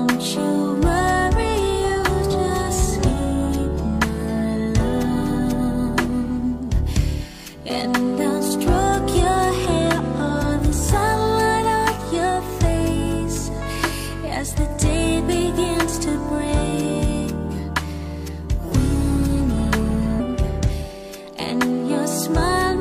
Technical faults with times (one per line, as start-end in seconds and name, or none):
20.16-20.21 stream segment skipped